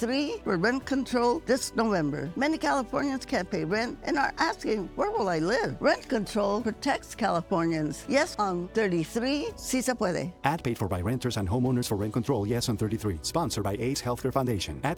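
No technical faults can be heard anywhere in this audio.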